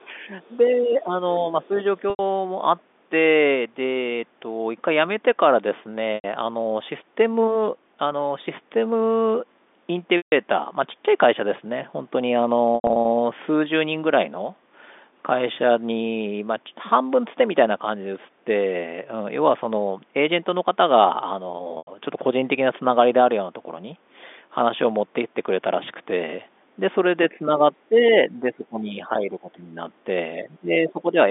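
From the very start to 0.29 s, and again from 0.78 to 1.79 s, the speech is pushed down by roughly 15 dB and then roughly 10 dB. This is speech suppressed in double talk, likely caused by the echo canceller attenuating the near talker while the far side is also active. Between these stretches, from 0.17 to 0.75 s and briefly at 1.77 to 1.83 s, the other side's voice leaks through at about 20 dB below the speech. This is likely residual loudspeaker echo left in the microphone signal.

Packet loss with pitch repetition then appears as short held, buzzy sustains where the last pitch period is looped to cover the gap. It occurs for 90 ms at 2.1 s, 90 ms at 6.15 s, 150 ms at 10.17 s, 180 ms scattered across 12.75 to 13.05 s, and 90 ms at 21.78 s. The 90 ms losses fit three 30 ms packets.

Near the end, the speech dips by roughly 10 dB across 27.3 to 29.77 s. Faint far-side leakage at about 25 dB down sits at 27.71 to 27.86 s. 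A deeper cut of roughly 20 dB follows from 30.44 to 31.16 s. All of this is heard through the narrow G.711 telephone band.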